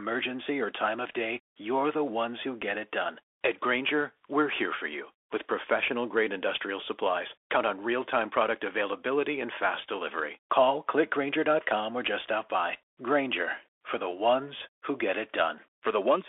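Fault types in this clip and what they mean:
Bluetooth CVSD headset codec: The speech sounds boxed-in and thin, with nothing above about 3.5 kHz or below 300 Hz, plus scratchy s sounds and a granular hiss underneath. This comes from the one-bit adaptive delta coding of a narrowband headset link, which fits 64 kbps CVSD.
Unconcealed Bluetooth headset packet loss: The speech has a tiny, abrupt break of about 3.8 ms at 2.62 s, after "you're the ones who" and before "it done". About one voice packet between headset and phone was lost, and nothing filled the gap.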